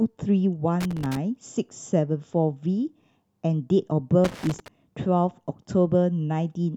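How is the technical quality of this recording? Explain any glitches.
The speech is marred by two bursts of loose connector crackle, at 0.80 to 1.17 s and 4.24 to 4.68 s. A worn or dirty contact in the signal path made and broke rapidly, chopping the audio into fragments, heard as irregular scratchy crackle.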